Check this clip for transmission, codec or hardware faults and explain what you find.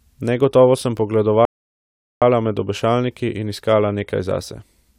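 One transmission fault. From 1.45 to 2.22 s the speech drops to silence, then picks up exactly where it stopped at "med obešalniki in iskala", with nothing lost. This is a rebuffering stall: playback ran out of downloaded audio and waited about 0.77 s for more data.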